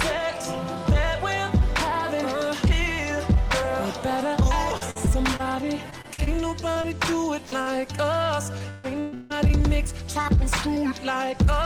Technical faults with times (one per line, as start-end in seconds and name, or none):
4.77-6.85 repeated packet loss (robotic sound)
7.45-7.54 burst of packet loss
7.62-7.68 short concealed packet loss
8.58-9.32 repeated packet loss (robotic sound)
10.22-10.26 short concealed packet loss
10.74-10.78 short concealed packet loss